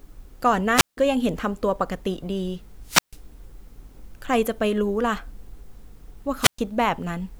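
At 0.74 s the speech hits a wireless microphone squelch dropout lasting until 0.97 s. Hiss swells, then the output goes nearly silent for about 165 ms. The radio link from the transmitter faded, and the receiver's squelch muted it. The same happens from 2.83 to 3.20 s, with a mute of about 142 ms. A shorter dropout follows from 6.41 to 6.59 s, muting about 118 ms before the voice returns.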